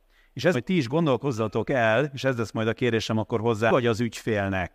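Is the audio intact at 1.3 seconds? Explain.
Yes, the audio is intact at 1.3 seconds, with no fault audible at that moment.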